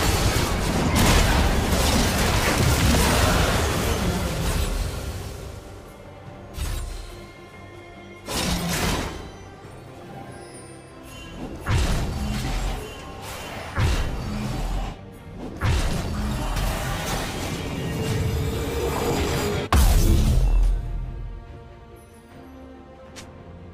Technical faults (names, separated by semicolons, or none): none